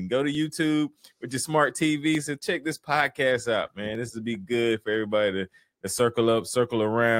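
Clock drift buffer slips, 0.35 to 5.75 s: about four regular clicks every 1.8 s, likely from two clocks roughly 400 ppm apart, each slip dropping or repeating some 30 samples.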